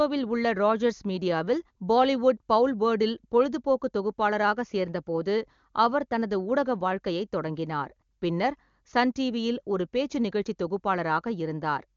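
No technical faults are audible.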